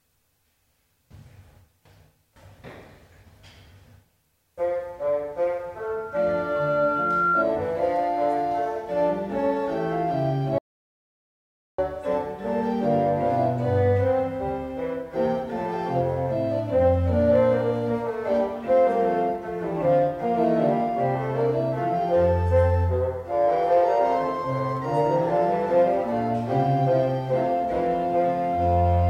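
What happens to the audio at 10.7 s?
At 10.7 s you're inside an audio dropout to silence: from 10.58 to 11.78 s, about 1.2 s, it goes dead silent, likely a lost input link.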